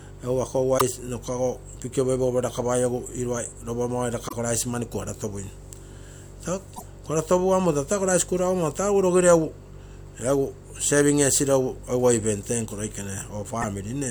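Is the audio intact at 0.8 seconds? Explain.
No. Between about 0.75 and 0.81 s the speech is hit by damaged data in a compressed stream: a stretch of the encoded bitstream reached the decoder corrupted, so the frames there were misread or rejected and the decoder lost sync while it hunted for the next valid frame header. For roughly 70 ms the speech gives way to a short, harsh chirp or blip of garbled output.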